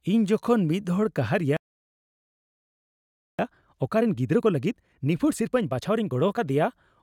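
A speech recording with a playback stall, followed by time-compressed catch-up. At 1.57 s the speech cuts off mid-flow and the output goes completely silent until 3.39 s, a gap of about 1.82 s. The likely cause is the player running short of buffered data or its output thread being blocked, with nothing sent to the device until it recovered. When sound returns at 3.39 s, the player works off the accumulated backlog by removing short segments and cross-fading across the joins. Through 6.39 s the speech runs at 1.25 times its normal rate while keeping its original pitch. The result is hurried delivery. After 6.39 s the backlog is cleared and the timing returns to normal speed.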